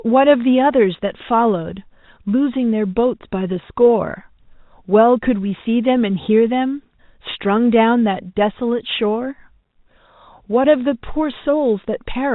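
No faults found in this speech; what can be heard is the normal G.711 telephone coding, with nothing passing above 4 kHz.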